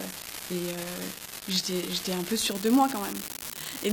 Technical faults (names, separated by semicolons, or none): unreliable data bit; adaptive stream starting at a low bitrate